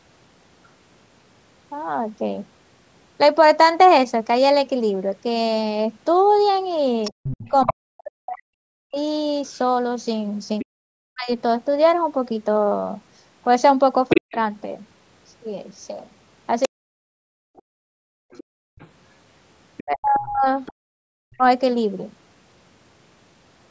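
A speech recording, band-limited by call microphone processing with nothing above 8 kHz, carries a second, fainter voice in three places: a blip at 0.64 s, far below the main talker, then longer stretches from 7.04 to 10.65 s at roughly 10 dB down and from 14.09 to 21.36 s nearly as loud as the speech. This is the other side's voice leaking through, likely loudspeaker sound that the echo canceller failed to remove from the microphone. Between 7.11 and 21.43 s the main talker dips, about four seconds in all, with drops as deep as about 40 dB. That fits speech suppressed in double talk, likely the canceller turning everything down when both sides spoke together. From 17.96 to 18.78 s the room sound itself falls away by about 35 dB, background gated by the echo canceller while the loudspeaker was active.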